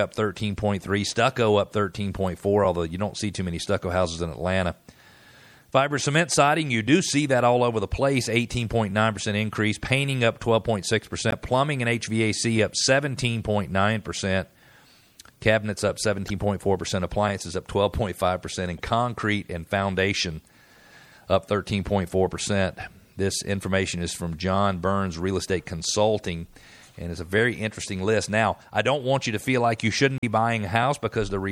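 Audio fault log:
throughout: MP3 compression. The coding is likely MP3 at a low rate, which fits about 64 kbps. The encoder, short of bits, drops weaker frequency lines that flicker between frames and trims the treble, giving plainly audible watery, swirly speech with smeared consonant attacks.
11.31–11.33 s, 16.27–16.30 s (after "cabinets up"), 18.78–18.80 s (before "concrete and foundation"), 30.18–30.24 s (after "feel like you shouldn't"): damaged data in a compressed stream. Corrupted frames force the decoder to lose sync and hunt for the next header, producing a brief disruption.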